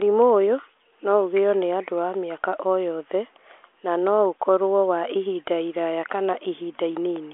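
The speech comes over a G.726 ADPCM telephone path at 40 kbit/s, held to the 300 to 3400 Hz line band with nothing above 3.8 kHz, and any coding noise stays faint at most, with no technical fault to be heard anywhere in the audio.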